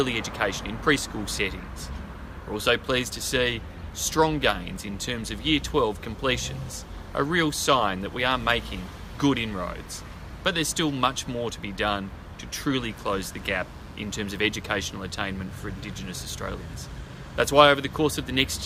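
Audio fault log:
12.88 to 16.99 s, mains buzz: A steady, raspy buzz sits under the sound for about four seconds, then stops. It runs roughly 30 dB below the main signal. The buzz is built on 60 Hz mains. Sharp switching spikes, likely from a dimmer, a rectifier or a missing shield, get into the signal path twice per cycle. That gives a 120 Hz repetition. The spikes carry harmonics up to several kHz, which makes the buzz rough rather than humming.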